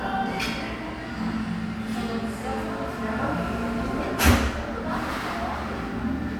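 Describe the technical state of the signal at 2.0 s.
At 2.0 s the signal is intact, with no dropout, clipping, glitch or other fault at that moment.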